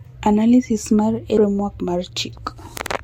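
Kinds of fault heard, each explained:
CD skip: the player's laser lost its track and landed on a different turn of the disc's spiral, so playback mutes briefly and resumes from another point in the speech. Here the dropout is only about 5 ms, around 1.37 s, heard as a tick followed by a jump in the speech. On a waveform it shows as a tiny near-silent gap with mismatched signal either side; a spectrogram shows a thin vertical broadband line where continuity breaks.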